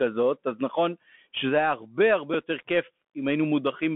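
A speech recording with a thin, boxed-in sound throughout. There is nothing above the telephone band, roughly 150 Hz to 3.4 kHz, and a granular hiss sits under the voice. Sibilants come out scratchy, and louder bright moments break up into a rough edge. That is the Bluetooth CVSD headset codec at work. It tracks the waveform one bit at a time, stepping up or down with an adaptive step size. When the signal moves faster than the step can follow, the result is that distortion and grit. The character fits a 64 kbit/s CVSD link. At 2.34 s there is a brief tick lasting about 7.5 ms. This is a Bluetooth headset packet repeated: audio between headset and phone went missing, and the chip decoded the previous packet's bits again to fill the gap. The gap's length fits two lost 3.75 ms packets, which is too short a run to build into a steady buzz.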